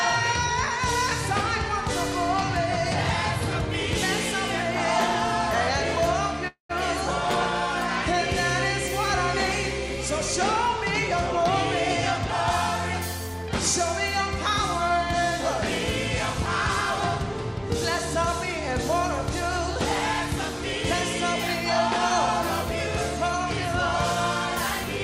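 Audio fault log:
6.47–6.71 s, call audio freeze: the sound stops advancing and a buzzy, hiss-like continuation of the last moment fills about 220 ms, fading until roughly 110 ms of silence remains, likely because delayed packets drained the jitter buffer. When playback resumes, the audio continues where it left off with nothing lost, so everything after is pushed 220 ms later. On a spectrogram, smeared repeating bands decay into a blank gap; the waveform shows a shrinking envelope, then a flat stretch.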